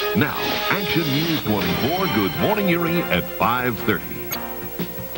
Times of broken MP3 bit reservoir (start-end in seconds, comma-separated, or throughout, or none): 4.30-4.36